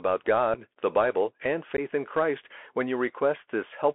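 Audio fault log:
Throughout: Bluetooth CVSD headset codec. Narrowband line around 250 Hz to 3.4 kHz, with one-bit delta coding giving scratchy s sounds, granular hiss, and strained loud peaks.
0.54 s and 1.77–1.80 s: unconcealed Bluetooth headset packet loss. Abrupt holes of about 7.5 ms, then 15 ms, fitting one and then a couple of dropped packets. The sound returns briefly quieter.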